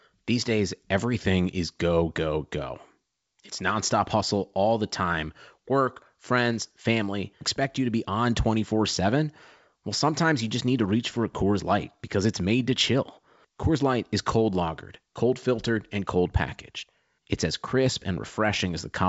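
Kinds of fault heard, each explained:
No faults heard in this clip.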